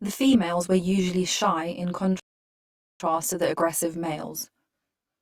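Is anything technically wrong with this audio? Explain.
Yes, there are two faults: channel delay with comb filtering throughout, and one rebuffering stall.

The channel delay runs for the whole clip. One channel arrives around 20 ms behind the other, and when the two are folded to mono, whatever they share cancels at evenly spaced frequencies, starting near 20 Hz and repeating up the spectrum. With a delay this long, the speech sounds rough and slightly doubled, a quality that never changes.

The rebuffering stall runs from 2.20 s to 3.00 s. The player exhausted its downloaded audio just after "were usually shy in" and waited for more data before continuing. The speech drops abruptly to silence for about 805 ms, then picks up exactly where it stopped, with "to the aggressive". No speech is lost, but the pause lengthens the clip and breaks the phrase unnaturally.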